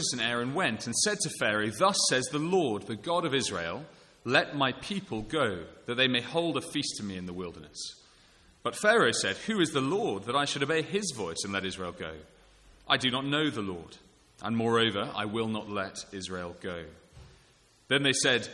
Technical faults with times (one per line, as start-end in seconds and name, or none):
none